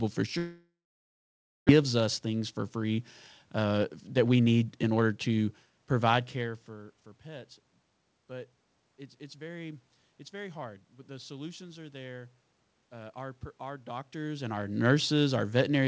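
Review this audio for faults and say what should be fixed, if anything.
From 0.38 to 1.71 s the sound trails off into a fading buzz and then about 0.93 s of near-silence, and about a second of the audio never returns. This is likely a long network dropout: packets stopped arriving, and the receiver concealed the gap before giving up. Preventing it means fixing the network path, for example with a more stable link or redundancy/FEC, so bursts of loss don't starve the receiver.

Right after the gap, the audio sounds rushed at normal pitch, at 109% speed from 1.82 to 2.99 s and 111% from 3.57 to 5.13 s, ending just before "to provide care for". This is jitter buffer speed-up. The dropout left the buffer holding roughly 0.3 s too much, so the receiver cut about 0.1 s and then 0.2 s of pitch periods to drain it. Keeping delay steady on the network, or letting the buffer drain more gently, would prevent the hurried stretches.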